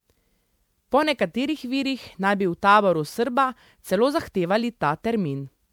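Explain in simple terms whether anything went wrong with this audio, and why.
Something did go wrong, from start to finish. The speech sounds swirly, hollow and smeared, and sharp sounds lose their edges. This is generation loss. The audio was likely squeezed into MP3 about seven times over, and each pass added fresh damage.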